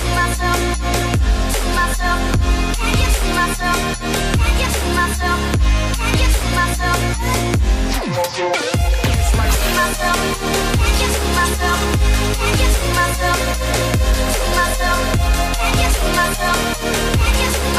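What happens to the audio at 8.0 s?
Nothing goes wrong at 8.0 s; the audio plays through that moment intact, with no dropout, click or other fault.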